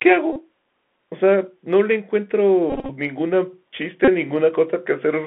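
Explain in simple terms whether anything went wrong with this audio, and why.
Bluetooth CVSD headset codec, across the whole clip: the speech went through the narrow codec that Bluetooth headsets use for calls. It passes only a thin band, from about 200 Hz to 3.5 kHz, so everything sounds boxed-in and telephone-like. The codec builds the sound from tiny up-or-down steps that can't keep up with sharp, bright sounds, so s sounds come out scratchy and a grainy hiss sits under the speech.

Bluetooth headset packet repeated, at 0.33 to 0.39 s, 2.70 to 2.90 s and 4.05 to 4.09 s: small chunks of sound were lost on the wireless link between headset and phone. Each time, the chip replayed the previous chunk instead. Because those chunks are very short, the repeats form a brief buzz near 267 Hz. The first and last are short bursts. The middle one is broken up and scattered, with the longest stretch lasting about 20 ms.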